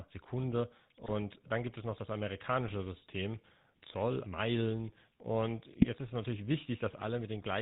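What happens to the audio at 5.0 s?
At 5.0 s the speech sounds buzzy and gravelly, dull with nothing above 4 kHz, as it does throughout the clip. This is GSM full-rate codec damage, consistent with 13 kbps: the voice is rebuilt from a vocal-tract model driven by sparse, regularly spaced pulses.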